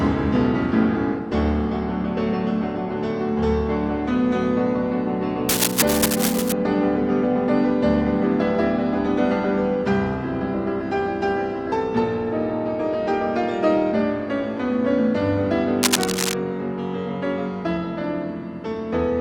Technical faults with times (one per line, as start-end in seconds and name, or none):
5.49-6.53 cable scratch noise
15.83-16.34 cable scratch noise